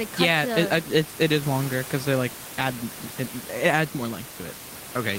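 No technical faults are audible in this recording.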